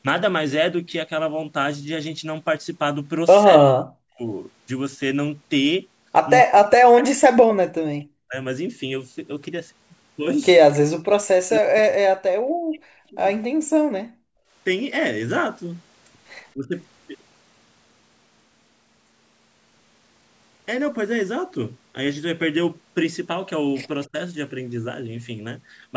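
From 3.58 to 4.23 s, 6.45 to 8.36 s, 11.41 to 12.28 s and 12.69 to 13.18 s, the speech sinks by as much as roughly 40 dB. This is speech suppressed in double talk, likely from an echo canceller clamping the near talker while the far side also spoke. The waveform shows sudden hollows in the envelope, and the spectrogram shows the harmonics fading out.

From 14.04 to 14.52 s, the background is gated by the echo canceller. The room tone drops by about 36 dB during loudspeaker playback and then returns. This appears as a near-empty vertical band on the spectrogram and a flat, silent stretch on the waveform.

The same double-talk suppression returns briefly and more shallowly, at around 15 to 25 dB, from 16.54 to 16.76 s and from 24.06 to 24.16 s. These show as short notches in the envelope.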